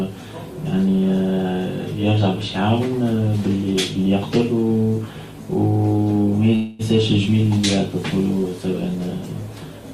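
A call audio freeze interrupts the sound between 6.55 s and 6.96 s: the sound stalls, and the last moment before the stall is stretched into a fading buzz for about 236 ms. The sound then picks up exactly where it stopped, so nothing is skipped, but everything afterwards runs roughly 236 ms late. The likely cause is network packets being held up in transit long enough for the receiver's jitter buffer to run dry.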